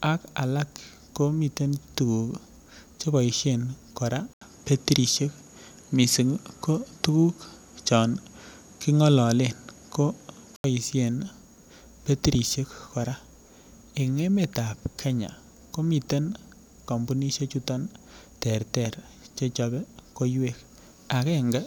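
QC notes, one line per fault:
4.33–10.64 s, input switched to a poorer device: likely a swap to another mic. After a brief 80 ms gap, sound dulls above 13 kHz, shifts level and brings new background noise.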